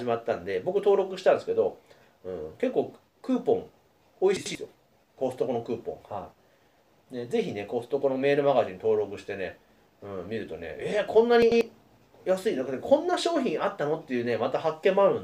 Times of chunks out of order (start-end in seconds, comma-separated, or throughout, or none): 4.37-4.55, 11.42-11.61